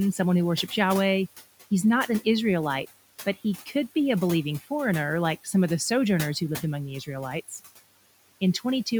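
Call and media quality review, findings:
Noise suppressor artifacts throughout: per-frame band attenuation cuts steady noise by about 16 dB, so room noise (about 18 dB below speech) drops in gaps and swells under speech.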